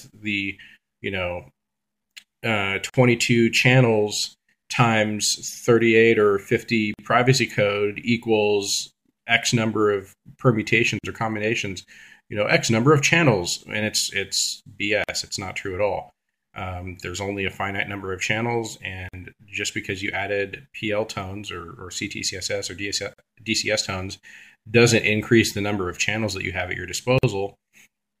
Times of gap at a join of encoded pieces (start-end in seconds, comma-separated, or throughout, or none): 2.90-2.94, 6.94-6.99, 10.99-11.04, 15.04-15.09, 19.09-19.14, 23.14-23.18, 27.18-27.23